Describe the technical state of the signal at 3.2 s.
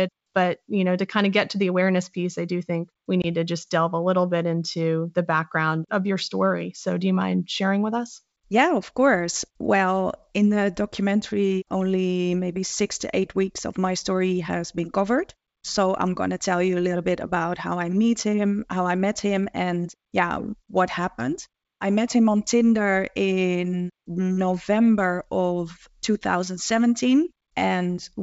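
Packet loss on an ADPCM call: a 20 ms hole (3.22–3.26 s) after "I do think we", about one packet, leaves a hard-edged blank stripe. The desynchronised predictor then brings "to just delve a" back slightly distorted before it settles.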